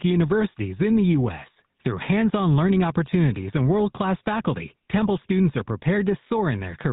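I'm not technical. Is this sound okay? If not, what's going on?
No, not quite. All the way through, this speech has gone through the GSM full-rate codec, the squeeze that early mobile phones used. It rebuilds the voice from a rough model of the mouth and throat, fed by a thin, evenly spaced pulse instead of the real sound, so voices come out buzzy and gravelly. It also drops everything above 4 kHz, which is why it sounds muffled and phone-like. Here the damage is easy to hear.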